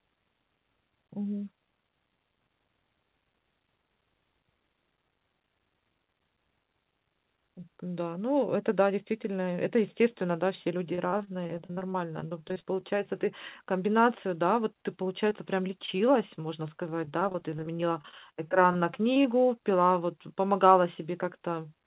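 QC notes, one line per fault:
10.95–12.94 s, 15.86–16.38 s and 16.78–19.25 s, repeated packet loss (robotic sound): packets kept arriving late or not at all, leaving a rapid string of short holes, the longest 47 ms. Each hole was bridged by extending the sound just before it, and the next hole followed soon after. That patched audio makes up roughly a fifth of the first stretch and about an eighth to a sixth of the later two, so the speech turns choppy, with pieces missing, inside a band that stops at 4 kHz.
15.30 s, short concealed packet loss: about 10 ms of the call failed to reach the decoder in time. The receiver covered the hole by carrying the preceding sound forward, then blended back into the real signal. Because the patch is so short, it comes across as a tiny smear or wobble in the speech.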